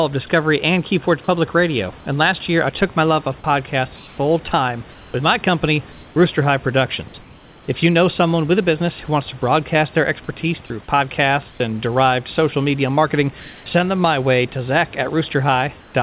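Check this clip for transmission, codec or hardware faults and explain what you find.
Two kinds of fault turn up in this speech, both tied to the sender's voice detector and the comfort noise that fills in for it. The narrowband call path underneath has nothing above 4 kHz, which fits G.711 A-law.

Sound dropped by the voice detector: At 3.40 s, right after "took my love of", and at 10.66 s, after "to broadcast their expertise", about 40 ms gives way to steady hiss, taking roughly 20 ms of sound with it. The detector likely misread the sound as background and stopped sending.

Comfort noise in place of the background: In the pauses at 3.96–4.18 s, 4.92–5.14 s, 11.5–11.6 s, 13.40–13.66 s (between "derived social media marketing" and "send them my way") and 15.80–15.94 s, the room's real background flattens into featureless synthetic noise, likely from discontinuous transmission. It sits about 25 dB below the loud parts and shifts from about 1 dB louder to about 7 dB quieter than the real background, so the pauses audibly change texture.

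The room noise sits about 27 dB below the speech and belongs to the recording, not the system.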